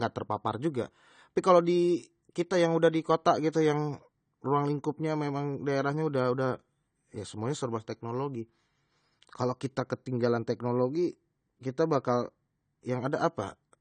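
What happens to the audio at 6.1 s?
Nothing sudden happens at 6.1 s. The speech there sounds the same as it does through the whole clip: dull and smeared, with nothing above about 9 kHz and a fizzy, warbly edge on sibilants. That's most likely AAC compression. AAC-LC at a low bitrate, something like 32 kbps, drops the top of the spectrum and coarsely quantises what's left, so fine detail smears and thinly coded bands swirl.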